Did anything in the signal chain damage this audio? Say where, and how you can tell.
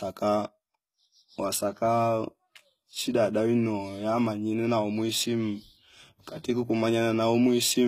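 Yes: HE-AAC compression throughout, at the codec stage. Sibilance sounds gritty and nothing reaches above 14.9 kHz, which points to treble likely rebuilt by band replication at about 20 kbps.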